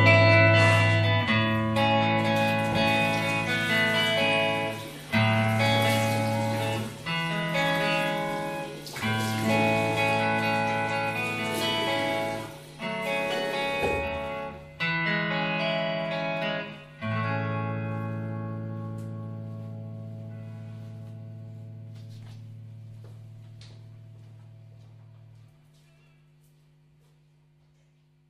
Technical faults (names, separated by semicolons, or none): none